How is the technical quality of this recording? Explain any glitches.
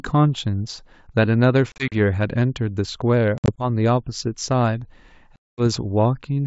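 The recording has three glitches from packet loss on an ADPCM call, heard over clean wideband G.722 coding. Between 1.72 and 1.95 s, and again between 3.38 and 3.67 s, about 100 ms of sound drops out in scattered hard-edged holes, the longest 40 ms and 60 ms. From 5.36 to 5.62 s a single 220 ms gap falls. The missing packets become silence, and the receiver's adaptive predictor and step size lose sync with the sender's. Each hole therefore ends in slightly distorted speech that settles within tens of milliseconds. A plain dropout wouldn't have that.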